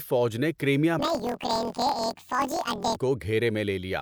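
Right after "فوج نے کرائمیا", from 0.99 to 2.98 s, planar audio is read as interleaved: each 24 ms block of left-then-right samples plays as two double-speed halves. The sound jumps an octave up with a robotic buzz at 41.7 Hz, seen as stretched harmonics and vertical striations every 24 ms.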